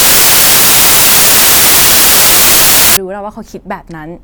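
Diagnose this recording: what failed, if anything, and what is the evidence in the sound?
Sample-format conversion: from 0.0 to 2.97 s, samples built from the wrong bytes produce loud, harsh broadband noise, close to white on the louder speech, unlike steady hiss, which never follows the speech.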